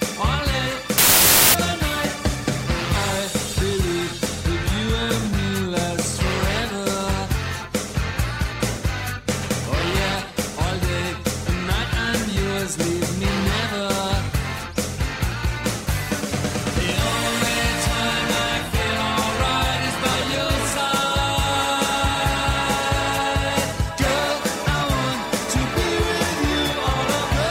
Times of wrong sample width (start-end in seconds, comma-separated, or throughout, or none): 0.98-1.54